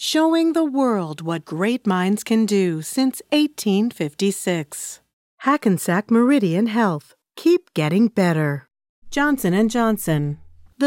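Nothing stood out on listening to this recording of speech.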